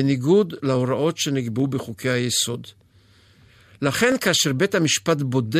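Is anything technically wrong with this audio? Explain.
Yes. From 0.75 to 4.96 s, clock drift buffer slips cause regular clicks every 0.84 s. A few hundred ppm clock mismatch likely drops or repeats a dozen or so samples at each slip.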